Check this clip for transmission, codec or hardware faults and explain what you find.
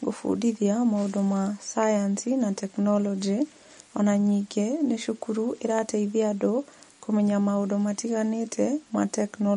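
One codec fault is present. It runs through the whole recording. MP3 compression is the likely cause. Nothing is heard above 10.6 kHz, and the damage is plainly audible, which points to a low bitrate near 40 kbps. Short of bits, the encoder cuts the treble and drops weak frequency components frame by frame. The speech sounds dull, watery and swirly, with chirpy s sounds and smeared attacks.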